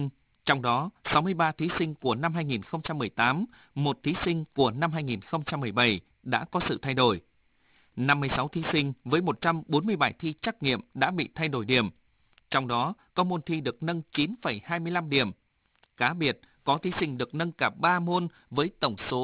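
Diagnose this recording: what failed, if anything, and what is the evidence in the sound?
Sibilants sound gritty and metallic throughout, with energy packed right up to 4 kHz: aliasing at sample-rate conversion, fitting an unfiltered drop to 8 kHz that folded high frequencies back down.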